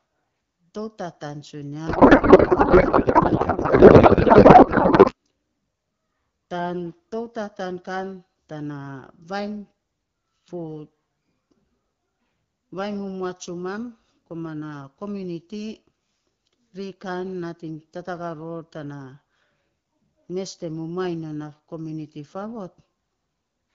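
Speech over an AMR wideband (HD Voice) link, where from 1.87 to 5.13 s a codec payload misread turns the speech into garbled noise and warble that barely tracks it. This fits octet-aligned AMR frames being unpacked as bandwidth-efficient, so the decoder pulls its parameters from the wrong bit positions.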